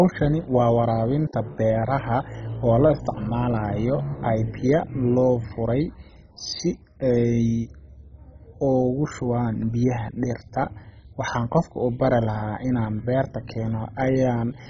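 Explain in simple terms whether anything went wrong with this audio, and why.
Yes, the whole speech clip has MP2 compression damage: it sounds dull, with nothing above about 7.3 kHz, plus a gurgling, grainy edge. It's likely from a low-quality MP2 encode that shut off the upper bands and coarsely crunched the rest.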